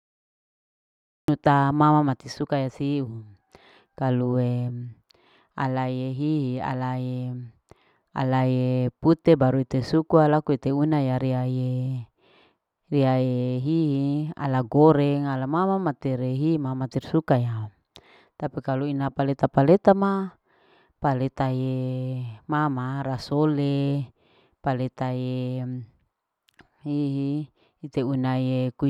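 The clip opens on digital silence until 1.28 s, where the speech enters abruptly mid-sound: a cut-off start from capture beginning late. There is no attack or fade-in. On a waveform, a flat line jumps straight into the signal; a spectrogram shows a hard vertical edge.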